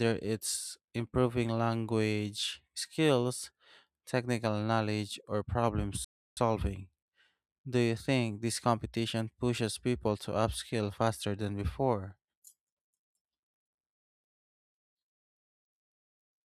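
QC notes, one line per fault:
6.04–6.37 s, playback stall: the player likely ran short of data or was blocked, so the speech cuts to silence for about 320 ms before resuming.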